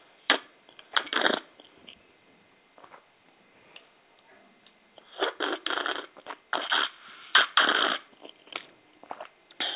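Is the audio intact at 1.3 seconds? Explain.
Yes, the audio at 1.3 seconds is intact, with nothing there beyond the narrowband character of the call path it passed through.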